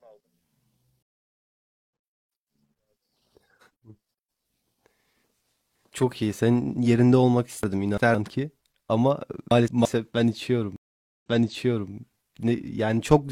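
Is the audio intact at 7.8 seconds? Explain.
No. Chunks out of order run from 7.63 to 8.15 s. A segment of about 171 ms was delayed and played after the two segments that should follow it, which points to late delivery. Nothing is lost, but the sound jumbles briefly, with three abrupt joins.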